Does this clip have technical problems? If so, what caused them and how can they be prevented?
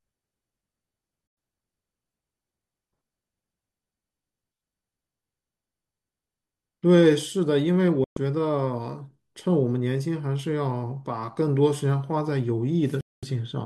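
Yes. The speech drops abruptly to silence three times: from 1.27 to 1.37 s, from 8.04 to 8.17 s, and from 13.01 to 13.23 s. Each hole is clean, with a fade of about 3 ms, and lasts roughly 100, 130 and 220 ms. This is a digital broadcast dropout. The receiver lost the signal or rejected corrupted frames and muted until valid ones arrived, and the gap lengths point to whole frames of about 24 ms going missing. Stronger reception, with a better antenna or less interference, would prevent it.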